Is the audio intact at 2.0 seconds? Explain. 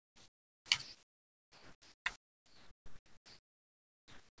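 No. From 0.82 to 2.06 s the speech gives way to steady, featureless noise for about 1.24 s, so 2.0 s falls inside the gap. This is likely sound dropped by the voice detector: the sender treated the speech as background and stopped transmitting, and the receiver filled in comfort noise until transmission resumed.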